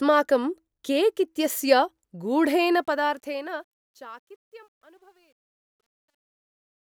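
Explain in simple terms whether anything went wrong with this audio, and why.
The fade-out has truncation distortion on a fade. Too few level steps were kept, so it turns gritty from 2.72 s and is worst from 4.15 s.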